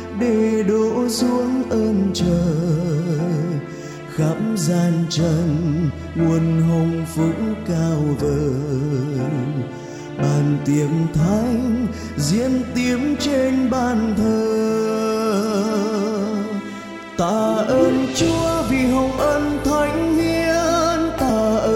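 A brief blip sounds at 21.30 s, just before the end. It is damaged data in the compressed stream: corrupted bytes made the decoder misread the frame there, lose sync and hunt for the next valid frame header before playback resumed.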